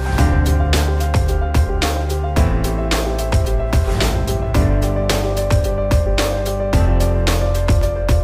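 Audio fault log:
No technical faults can be heard anywhere in the signal.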